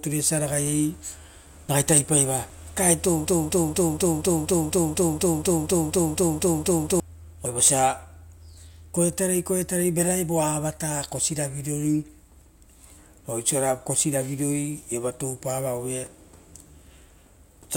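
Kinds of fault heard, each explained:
audio missing between chunks: short skips every 5 s, at 2.5, 7.46, 12.41 and 17.37 s, each losing a few tens of milliseconds, likely dropped at chunk boundaries.
broken-record loop: from 3.27 to 7.0 s a 241 ms fragment repeats 15 times back to back, likely a stalled stream resending it, and the speech there is lost.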